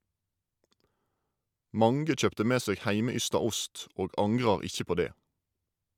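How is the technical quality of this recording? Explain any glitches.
No technical faults are audible anywhere in this recording.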